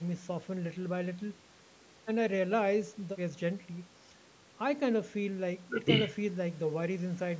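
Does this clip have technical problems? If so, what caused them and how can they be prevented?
No, no technical problems.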